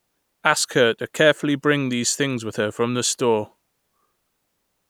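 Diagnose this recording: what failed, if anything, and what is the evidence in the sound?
No failure found; nothing in this speech points to one.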